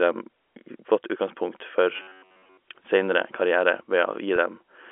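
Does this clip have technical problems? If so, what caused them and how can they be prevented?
Yes. From 1.97 to 2.57 s the speech turns into a rigid, metallic buzz fixed near 94 Hz. This is robotic sound from repeated short buffers, likely caused by audio arriving too late so that a block of about 10.7 ms is replayed, which imposes a buzz at one over its length. A spectrogram shows flat harmonics spaced 94 Hz apart, and the waveform shows roughly repeating cycles. A larger receive buffer or a steadier audio thread would prevent it.

From 4.36 to 4.38 s, a 20 ms gap, which points to a single lost packet, is bridged by packet loss with pitch repetition. The last pitch period is replayed, so the sound briefly holds as a buzzy note. The waveform shows a few copied cycles, and the spectrogram shows the harmonic pattern frozen for an instant. Forward error correction or a modest jitter buffer would prevent it.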